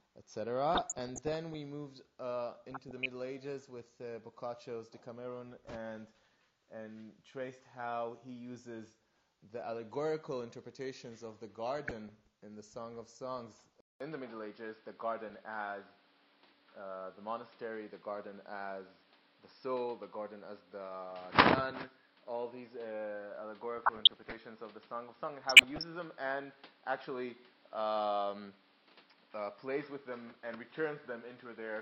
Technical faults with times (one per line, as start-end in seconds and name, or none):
0.75-1.54 DAB burbling
2.70-3.10 DAB burbling
11.88-12.13 DAB burbling
13.80-31.81 input switched to a poorer device
15.30-15.37 DAB burbling
23.78-24.38 DAB burbling
25.41-25.83 DAB burbling